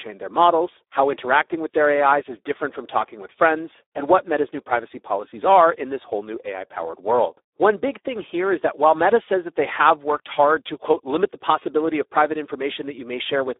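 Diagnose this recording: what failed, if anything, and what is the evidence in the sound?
The speech sounds hoarse, grainy and somewhat robotic throughout, with a thin, boxy tone: nothing is audible below about 300 Hz or above 3.8 kHz, and the usable band sits at roughly 300 Hz to 3.7 kHz. The failure is at the codec stage: heavy Speex codec damage. Its CELP coder, running at a rate consistent with about 8 kbps, has too few bits to model the excitation, so the voice source collapses into noisy, buzzy approximations.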